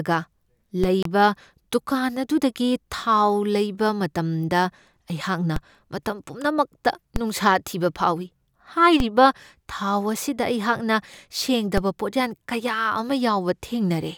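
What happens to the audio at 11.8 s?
At 11.78 s there's a DC step: the waveform's zero line suddenly jumps to a new offset, which you hear as a single low thump. The offset then bleeds away through a high-pass around 20 Hz, while the speech carries on unaffected.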